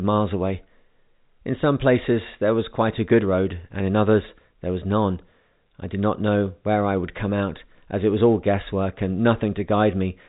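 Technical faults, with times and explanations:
No technical faults are audible in this speech recording.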